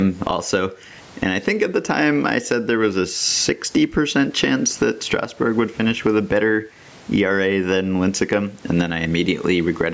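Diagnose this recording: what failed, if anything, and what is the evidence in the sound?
Gain pumping, at the microphone input stage, runs throughout. The gain swings by around 15 dB, pulled down under loud syllables, likely from excess gain driving a fast limiter. A noise gate would instead cut the pauses abruptly.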